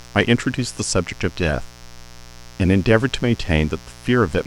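Mains buzz runs throughout the speech: switching spikes at 60 Hz, twice per cycle, spray harmonics into kilohertz, giving a steady raspy buzz roughly 25 dB below the voice.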